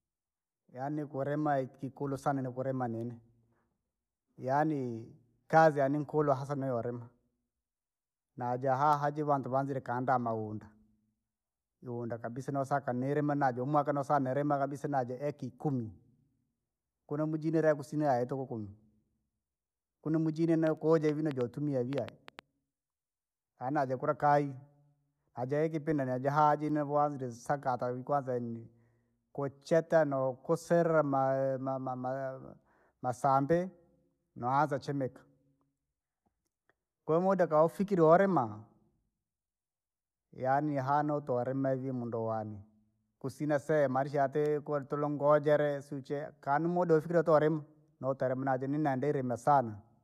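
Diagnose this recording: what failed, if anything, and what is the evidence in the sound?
A train of clicks runs from 20.67 to 22.40 s, right after "kunu mujini": about ten similar pops at roughly 4.65 per second, unevenly spaced, sitting well above the speech. Likely a faulty connection or power supply, or nearby interference, injecting pulses on the analogue wiring.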